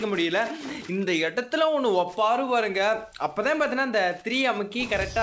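Nothing goes wrong here at all; the sound arrives over a call line with its top end stopping at 8 kHz, which fits a wideband codec like G.722, and there's simply nothing to point to.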